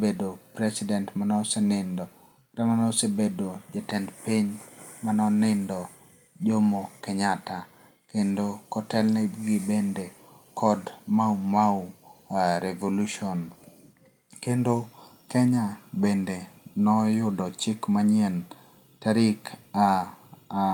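No technical faults are audible.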